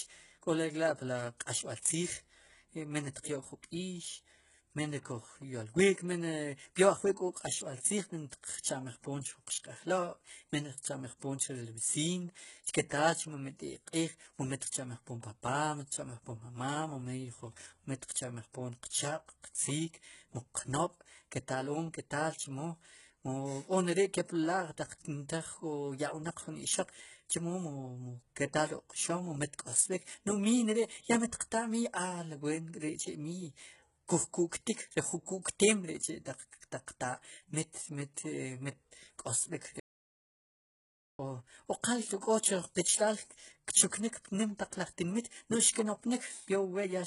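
Throughout, the speech has gritty, lispy s sounds and a hard ceiling at 11.1 kHz on the spectrogram, with copied-looking treble bands: likely HE-AAC compression at a very low bitrate, roughly 12 kbps.

From 12.89 to 12.91 s, pre-echo: a short hiss smears about 22 ms ahead of a sharp attack, visible as noise before the transient in the waveform.

From 39.80 to 41.19 s, a roughly 1.4 s audio dropout to silence, with the waveform flat and no room tone, likely from lost input.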